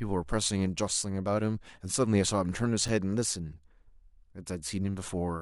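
A gap between stream segments appears at 2.88 s. The timestamps of two adjoining segments leave a small hole, and the player fills it with silence, adding about 6.4 ms. The sound drops out for under 10 ms with hard edges, but nothing is lost.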